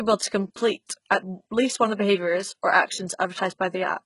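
Throughout, the speech likely passed through heavy HE-AAC compression at a very low bitrate, around 12 kbps. Its treble is rebuilt from copied lower bands and stops at 11.1 kHz, leaving s sounds gritty and metallic.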